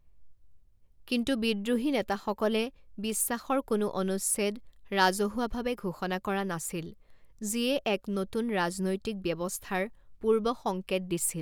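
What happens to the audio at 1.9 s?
Nothing goes wrong at 1.9 s; the speech carries on cleanly through that moment with no dropout, click or distortion.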